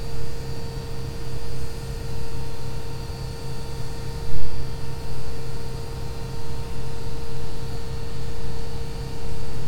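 No technical faults can be heard anywhere in this recording of sounds; the signal runs without any interruption or damage.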